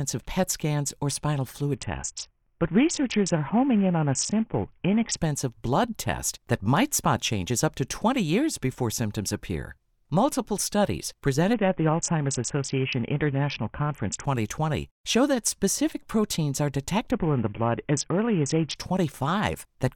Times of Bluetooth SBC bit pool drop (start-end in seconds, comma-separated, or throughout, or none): 1.75-5.17, 11.53-14.24, 17.11-18.76